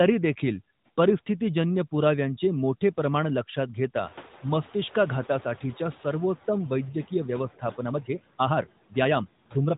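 Noise suppressor artifacts run throughout the clip: the suppressor cuts the steady background by about 13 dB frame by frame, leaving a residue that dips between phrases. The top end stops near 3.8 kHz, which fits the narrowband mobile codec.

Noise suppressor catching up occurs from 4.03 to 6.35 s. The room noise jumps by about 17 dB around 4 s, and the suppressor's noise estimate lags behind. The louder noise first comes through with only about 8 dB of reduction, then sinks over 2.32 s as the estimate adapts.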